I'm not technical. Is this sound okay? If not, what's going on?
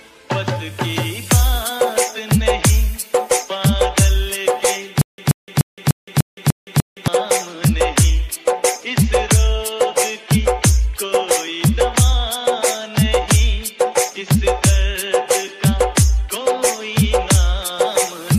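No. From about 5.01 to 7.08 seconds the sound catches and repeats itself: one short snippet, roughly an eighth of a second long, plays again seven times, each followed by a brief dead silence, so it ticks along about three times a second. This is a stutter with silent gaps. The likely cause is that the player or stream stalled, kept replaying its last fragment while waiting, and the audio meant for those two seconds was lost.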